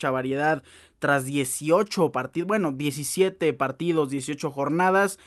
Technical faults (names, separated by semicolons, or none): clock drift between sender and receiver; repeated timing corrections